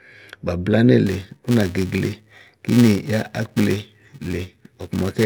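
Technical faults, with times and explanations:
1.07 to 5.26 s, filter restarted on every block: from 1.07 s to the end, a steady 345 Hz buzz sits on the speech, which fits a filter running on 128-sample blocks that loses its memory at each boundary and starts again from zero, leaving a small transient every block. Buffer underrun clicks fall at irregular spacing. These ticks are strictly periodic and scale with the speech level, swelling on loud syllables and fading in pauses.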